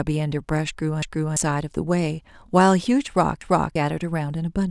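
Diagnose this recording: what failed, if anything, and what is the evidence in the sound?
The failure is at the driver or buffer stage: a repeated buffer, heard twice in this speech. From 1.02 to 1.37 s and again from 3.41 to 3.76 s, a block of about 341 ms plays a second time, with a hard join where the repeat begins. Each time, fresh audio missed its deadline, so the device replayed its last block, which fits an 8192-sample buffer. Roughly a third of a second of new speech is lost at each event.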